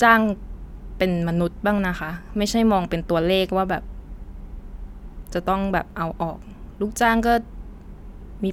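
Listening carefully to the speech, nothing stood out as a technical fault at any point.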